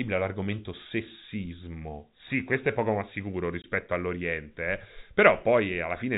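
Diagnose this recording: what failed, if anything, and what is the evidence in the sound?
At 3.62 to 3.64 s, right after "è poco ma sicuro", the speech drops out into a brief hole of dead silence, about 20 ms long, with hard edges. This is packet loss filled with silence at the network stage: a stretch of audio never arrived and the receiver played silence in its place. A 20 ms gap points to one missing packet. The telephone band, capped at 4 kHz by the G.711 coding, carries on either side of the gap unchanged.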